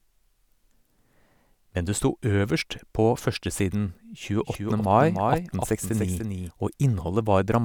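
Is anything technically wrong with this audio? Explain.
Yes. From 4.39 to 6.51 s there is a doubled audio track, likely a second, slower capture path mixed in. A full-band copy of the speech trails by roughly a third of a second, about 5 dB quieter, with no room colour, and it appears and disappears abruptly.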